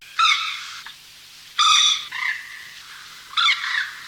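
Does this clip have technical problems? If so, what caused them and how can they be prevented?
Yes. Throughout the clip the sound carries a grainy, gritty distortion that tracks the signal and roughens the quietest passages. This is low bit depth without dither, likely from rounding to about 9 bits, leaving error around 40 dB below the signal. Keep at least 16 bits, and add dither whenever reducing bit depth.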